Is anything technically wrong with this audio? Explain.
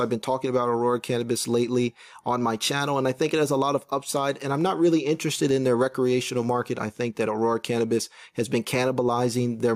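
Yes. Gain pumping runs through the whole clip, with the gain swinging by about 5 dB. The likely cause is excessive input gain with a fast limiter clamping down on peaks, leaving the sound squashed and flattened in level.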